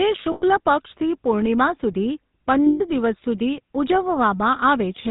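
Speech with a buzzy, gravelly roughness and nothing above 4 kHz throughout, the sound of the GSM full-rate codec, which fits its 13 kbps rate: the vocal tract is modelled and driven by sparse regular pulses. At 0.32 to 0.43 s and 2.66 to 2.82 s the sound is held as a rough metallic ring for about 100 ms and 140 ms. These are lost GSM frames, concealed by repeating the last good frame.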